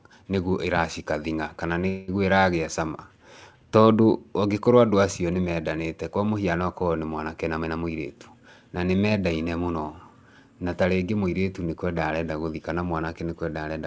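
A speech recording carrying two timing faults. From 1.88 s to 2.10 s there is a call audio freeze: the sound stalls and is stretched into a short fading tail for about 200 ms. The likely cause is delayed packets draining the receiver's jitter buffer, with the last sound extended while it waited. Nothing is lost; the audio resumes where it stopped, now 200 ms later. Between 7.48 s and 8.71 s, starting after "mũhiano okorwo nĩ mwanake" and ending before "na nĩ", a jitter buffer speed-up makes the speech sound hurried at unchanged pitch, running at 116% speed. The buffer had accumulated excess audio and trimmed it by repeatedly cutting short pitch-period segments, roughly a fifth of a second in all. Throughout, content stops at 8 kHz, which fits a wideband call codec such as G.722.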